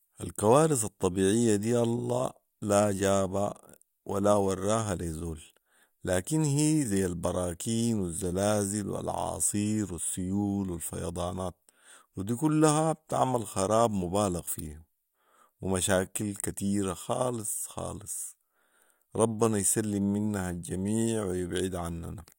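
Nothing in this speech recording stands out as a technical fault anywhere along the way.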